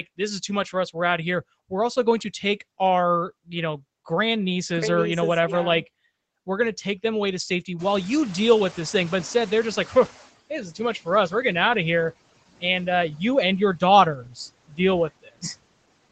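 Speech over a call line, with noise suppressor artifacts all the way through. The suppressor is pulling the steady background down by about 20 dB frame by frame, so the leftover noise dips in the gaps and comes back up under the talking, giving a pumping, uneven floor. Right after "them away to safety" the room noise jumps about 23 dB around 8 s, and you hear the noise suppressor catching up from 7.79 to 10.29 s. Its noise estimate lags the jump, so at first only about 13 dB comes off, then the noise settles down over roughly 2.5 s, finishing near "this is too much". Near the end there's speech cut by the noise suppressor, where it mistook bits of speech for noise. After "uh you and your" at 14.24–14.38 s the speech is turned down about 9 dB, then about 15 dB at 14.68–14.79 s, and about 20 dB at 15.22–15.58 s, so those stretches sound swallowed and faint. The top end stops at 8 kHz, which fits the Opus call path running somewhere near 20 kbps.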